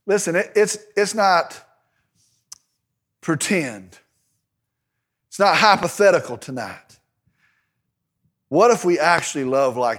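At 5.83 to 5.85 s and again at 9.18 to 9.20 s, a loud pop cuts through the speech, each a single sharp click roughly 15 dB above the surrounding level while the talking carries on beneath it. The likely cause is a brief voltage spike, such as static or a switching glitch, entering the signal chain. On a waveform each appears as a narrow spike towering over the speech; a spectrogram shows a thin vertical stripe spanning the full frequency range.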